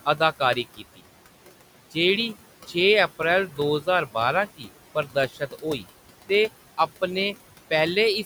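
A noise suppressor is working on the whole clip and leaving artifacts. The room noise sits about 16 dB under the speech. The suppressor pulls it down by about 17 dB in the gaps, then lets it back up whenever the speech starts. So you hear the background pumping in and out. It's gating bands frame by frame rather than cleanly separating the noise from the speech.

It also chews into the speech itself, which is speech cut by the noise suppressor. Between 0.76 and 1.0 s, something like a tenth of a second gets mistaken for noise and dropped by as much as about 16 dB, so a soft sound there goes faint. Right after "अप्रैल दो ज्हार बारां", from 4.56 to 4.68 s, it happens again, the deepest dip at about 18 dB. From 4.95 to 5.86 s it keeps clipping in and out, roughly a third of a second in all, down about 13 dB at worst. Those bits sound swallowed.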